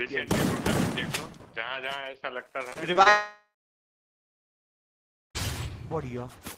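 Repeated packet loss (robotic sound) runs from 2.69 to 3.08 s. Four short holes open in the audio, the longest about 26 ms. Each is patched by stretching the sound just before it, and the next hole follows quickly, so about a fifth of this stretch is concealment rather than real signal. The result is choppy, with a robotic edge and small pieces of the sound missing.

A long network dropout follows at 3.10 s and lasts until 5.37 s. The sound is first carried on as a fading buzz or hiss. After that, roughly 1.9 s is left as silence or low steady noise. The audio returns at 5.37 s without the 2.26 s that never arrived. The cause is likely a break in the network stream, where nothing reached the receiver for the whole span.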